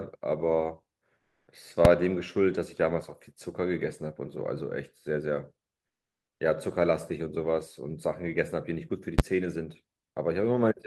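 From 1.17 to 1.47 s, about 300 ms of the quiet background, which sits about 57 dB below the loudest speech, gives way to a smooth, textureless hiss, and the level shifts by about 3 dB. This is comfort noise in place of the background. The likely cause is discontinuous transmission of the kind Opus DTX uses: the sender stopped transmitting during the pause, and the receiver filled the gap with synthetic noise that roughly matches the background's spectrum but loses its detail.

At 1.85 s a single sharp bang is heard. This is invalid numbers at full scale: a calculation produced infinite or undefined values, and the output was pinned to maximum amplitude for about 2.67 ms, which fits a 128-sample processing block. At 9.19 s the same fault recurs over about 10.67 ms, consistent with a 512-sample block.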